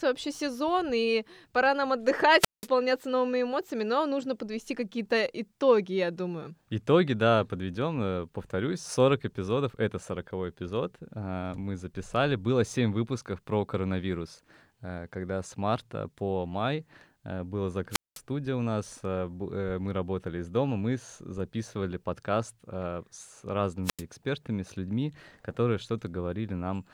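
At 2.39 s, 17.91 s and 23.84 s you get a wireless microphone squelch dropout: the FM signal fades, hiss swells briefly, then the receiver's squelch mutes everything for about 184, 204 and 88 ms respectively before the speech comes back.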